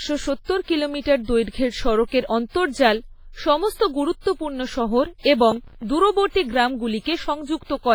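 Throughout, likely WMA compression at a low bitrate near 24 kbps spreads quantisation noise over long blocks and zeroes weak lines, leaving the speech with heavy ringing, washy smearing and breathing hiss.

From 5.52 to 5.83 s, processor overload crackle: audio buffers repeatedly missed their deadlines and were filled with old audio. This produces a hard-edged, gritty crackle that fits around ten missed buffers of roughly 5 ms.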